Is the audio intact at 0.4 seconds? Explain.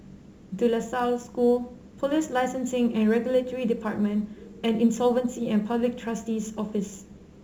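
No. Crude rate conversion runs throughout, fitting a 44.1 kHz to 48 kHz change by repeating samples. It adds a gritty, inharmonic fizz well below the speech.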